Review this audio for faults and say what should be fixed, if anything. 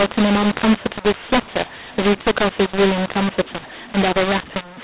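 The whole clip has a mu-law and A-law mix-up: the speech was coded as G.711 mu-law but decoded as A-law, so levels get scrambled, the speech turns harsh and gritty, and the quiet gaps fill with noise. Fix it by tagging the companding law and making the decoder read that tag.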